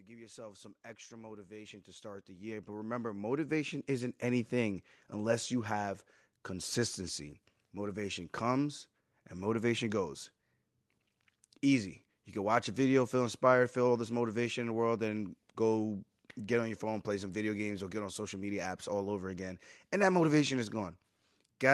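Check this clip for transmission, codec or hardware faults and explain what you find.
One fault stands out, in the opening seconds. From 0.06 to 5.26 s the automatic gain rising is audible: the gain control judged the input too quiet and climbed about 19 dB, so speech and background swell together. A waveform shows the envelope widening steadily; a spectrogram brightens across all bands at once. Above about 12 kHz the spectrogram is empty, which fits a call codec such as Opus running in its usual band limit.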